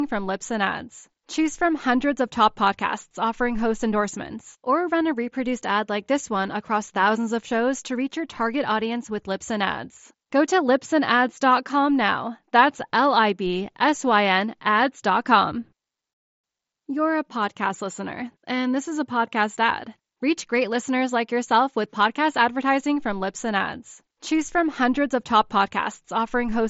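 Nothing's wrong with this speech clip; it just comes over a Bluetooth headset link using the mSBC codec, so there's nothing above about 7.7 kHz and a touch of that codec's light graininess.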